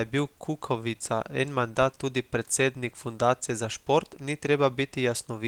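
Speech, with no technical faults to report.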